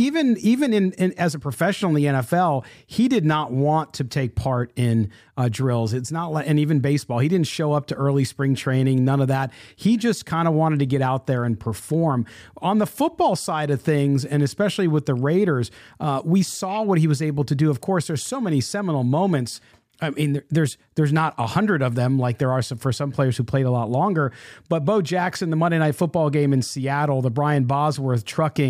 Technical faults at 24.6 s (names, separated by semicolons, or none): none